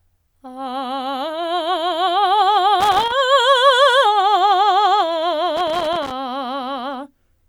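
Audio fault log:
2.80–3.12 s and 5.57–6.12 s, loose connector crackle: two irregular bursts of scratchy crackle break through the music, the first about a third of a second long, the second just over half a second. A worn or dirty contact is rapidly making and breaking as it shifts, chopping the signal and popping wherever DC sits on the line. The ragged, uneven spacing of the crackles sets it apart from evenly timed digital clicks or clean dropouts.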